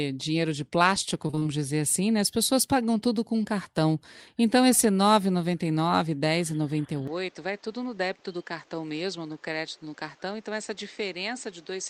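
Between 1.27 and 1.47 s there's a burst of repeated packet loss, which gives that robotic sound: five small holes, the longest 23 ms, each patched by stretching the previous sound, so nearly half that fifth of a second is concealment and the speech comes out choppy.

From 7.07 s to the end, the input likely switched to a poorer device. Nothing above 8.1 kHz survives, so the speech goes duller, the level drops by roughly 5 dB, and a new noise floor sits around 30 dB under the speech, with no gap at the changeover.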